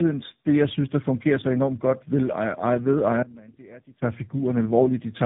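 Throughout, tandem speech coding: three speech codecs in a row compound roughness, muffling and warble beyond any single coder, with nothing above 3.8 kHz.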